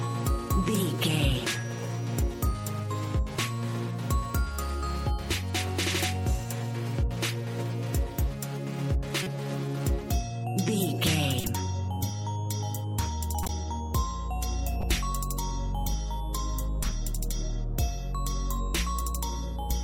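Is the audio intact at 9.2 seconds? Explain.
No, not quite. From about 9.15 to 9.27 s there's a corrupt frame decoded: a short run of compressed frames, sounds like a handful of them, picked up flipped bits, and the decoder played them anyway. The misread gains and codes scatter energy into the wrong frequencies, so for that tenth of a second you get a chirpy, noisy burst sitting around -20 dBFS.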